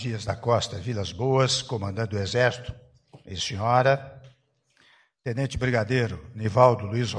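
No technical faults are audible.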